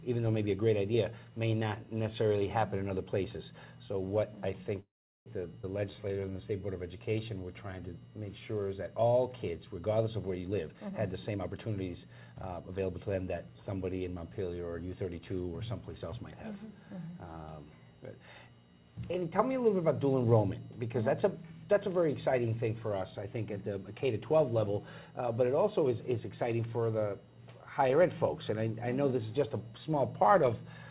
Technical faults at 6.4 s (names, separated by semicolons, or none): jitter buffer slow-down